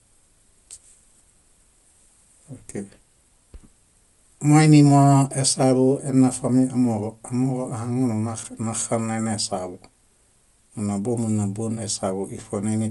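Throughout, the speech has a grainy, breathy top ending at 11.5 kHz, likely from Bluetooth LC3 compression. The grainy edge on the highs, not just a dull top, distinguishes it from plain band-limiting.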